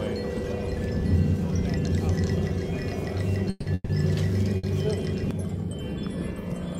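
At 3.50 s the sound stops moving forward and the last moment carries on as a fading buzz or hiss for about 160 ms, dropping to a brief near-silence before the audio resumes at 3.68 s. The same happens again from 3.74 s to 3.91 s, about 150 ms of filler ending in a short silent tail. This is a call audio freeze, likely from packets held up in transit so the jitter buffer emptied. Each time the audio picks up exactly where it stopped, so nothing is lost, but the stream ends up running about 160 ms and then 150 ms later.

From 4.57 s to 4.65 s one sound is held too long, with a slight buzz or dip lasting about 60 ms before the audio moves on. This is a short stall from a late packet: one packet was missing when it was due, the buffer ran dry, and the receiver stretched the last sound until it came in. Playback continues from the same point with nothing dropped, adding another 60 ms of delay.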